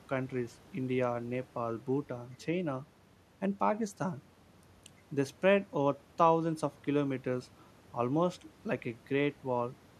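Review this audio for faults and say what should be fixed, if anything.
No faults turn up in the review, so nothing needs to be fixed.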